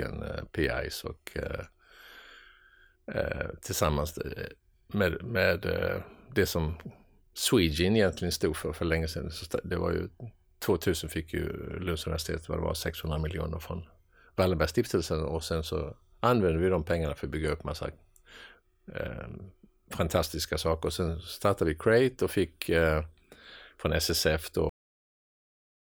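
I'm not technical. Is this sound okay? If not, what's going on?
No. The speech has a cut-off end: at 24.69 s the sound stops in the middle of speaking, and the last second or so is dead silence. The final stretch of audio was never written, so nothing remains there. A natural ending would finish the phrase and trail off, and a fade-out would get gradually quieter. A brief dropout would let the sound come back, but here it never returns.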